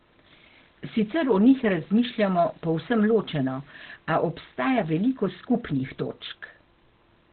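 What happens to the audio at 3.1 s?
At 3.1 s, as throughout, the speech has likely passed through heavy Opus compression in its narrowband SILK speech mode, which fits a very low bitrate around 12 kbps. Nothing survives above 4.5 kHz, so the voice sounds muffled and hoarse.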